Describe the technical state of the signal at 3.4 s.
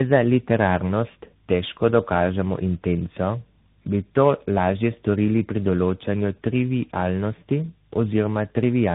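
At 3.4 s, as throughout, tandem speech coding: speech recoded through CVSD, AMR-NB and CVSD again sounds rough, muffled and warbly; the spectrogram shows smeared harmonics and nothing above 3.8 kHz.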